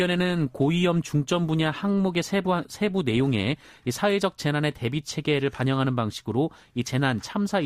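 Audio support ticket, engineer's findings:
Adaptive stream starting at a low bitrate: player opened on a low-rate rendition for fast start, then stepped up once throughput measured. 0.0–4.0 s: dull, band-limited speech, heavier codec artefacts, fitting roughly 24 kbit/s Opus. Sudden improvement at 4.0 s, no gap, consistent with 64 kbit/s.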